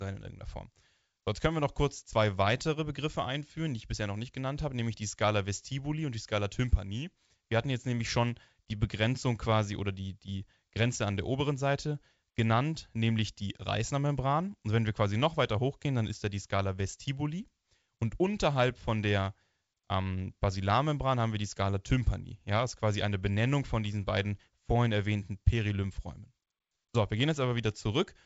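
The speech comes through G.722 wideband telephone coding with nothing above 7.7 kHz, a bandwidth and character that fit the codec running at its full 64 kbit/s rate.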